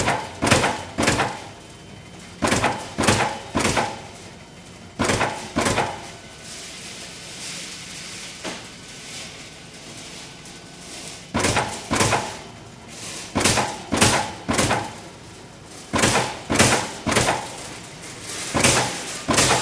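No technical faults are audible.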